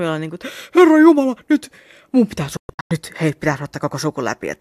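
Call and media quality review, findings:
Digital broadcast dropout, 2.57 to 2.91 s, after "jumala nyt mun pitää", before "nyt hei pitää". Speech mutes in several short holes totalling 264 ms across 336 ms. Longest gap 120 ms. Fades about 3 ms, so near-hard cuts. Probable component: receiver frame decoder. Signal lost or frames failed checksum, and the decoder muted until good frames resumed. Audio during the gaps is lost. The pattern points to roughly a dozen dropped frames.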